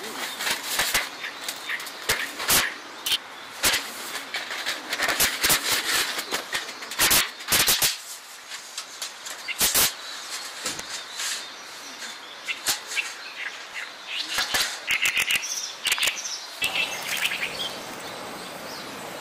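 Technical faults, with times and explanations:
Throughout, integer overflow: the signal is pushed about 14 dB past full scale, and around one percent of samples wrap to the opposite sign instead of being limited. Each loud peak jumps across the whole range, producing violent cracks far harsher than ordinary clipping.
2.36–2.53 s, 5.82–6.03 s, 8.30–8.64 s, 10.69–10.83 s, 13.34–13.80 s, 17.17–17.96 s, DAB burbling: corrupted bits slip past error correction into the MP2 stream, so short blips of noise appear in single sub-bands. The result is bursts of burbling noise, longest at the end.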